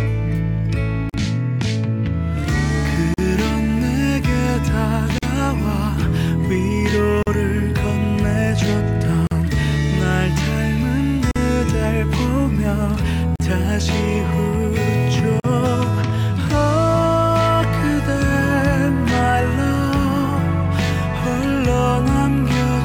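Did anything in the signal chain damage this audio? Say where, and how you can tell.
Yes: gap at a join of encoded pieces, at 1.10, 3.14, 5.18, 7.23, 9.27, 11.31, 13.36 and 15.40 s, every 2.0 s. Each is a silence of 43 to 45 ms with smeared edges, after which the sound resumes exactly where it stopped. This points to the codec stage. Separately encoded segments were joined untrimmed, leaving each one's encoder start delay and last-frame padding in place.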